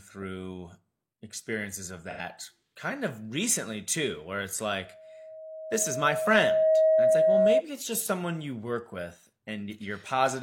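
A speech clip with one instance of AAC frame loss with concealment, from 2.10 to 2.20 s, between "experiences of" and "kind of recently too". For roughly 85 ms the decoder had no valid data and filled the gap from the last good spectrum, so the audio turns briefly smeared and noisy instead of dropping out. The gap's length fits two lost AAC frames.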